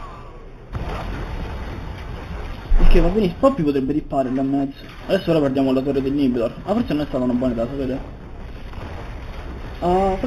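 Imaging from linear upsampling runs throughout, fitting an 8 kHz source raised to 48 kHz. The top end dulls, and faint mirrored images between 4 and 8 kHz, roughly 30 dB down, add a metallic shimmer.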